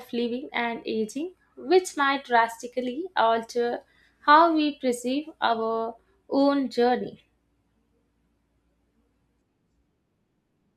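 No technical faults can be heard in the speech anywhere in the recording.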